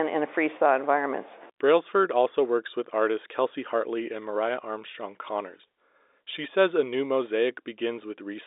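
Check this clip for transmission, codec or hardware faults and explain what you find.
No faults found here.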